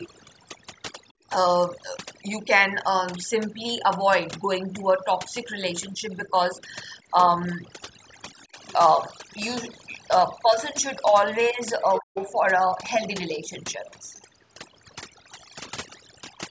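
A noise reduction stage set far too aggressively runs through the whole clip, cutting frequency bands near its noise estimate down to nothing and taking the quietest parts of the speech with them. The background sits at near silence with twinkling specks. From 1.13 to 1.25 s, the echo canceller clamped the microphone while the loudspeaker played, so the room sound drops out by about 25 dB for roughly a tenth of a second before returning. From 5.96 to 6.28 s there is a slight dip of about 5 dB in the speech, likely speech suppressed in double talk, where the canceller mistook the talker for echo while both sides spoke. The other side's voice leaking through, likely left behind by incomplete echo cancellation, appears as a very faint scrap about 35 dB below the speech from 6.57 to 6.76 s. At 8.52 to 8.58 s the speech dips again by about 10 dB, which is likely the same double-talk suppression. 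From 11.95 to 12.26 s the leaked voice is much stronger, only about 15 dB under the talker, probably because the canceller failed to remove it. In the middle of that passage, from 12.0 to 12.16 s, the talker's speech is cut hard by about 40 dB. That cut is likely the canceller reacting to double talk, which briefly chops the speech out. Two more brief, faint scraps of the other side, each about 30 dB down, come through at 13.34 to 13.39 s and 14.16 to 14.22 s, likely the same residual leakage.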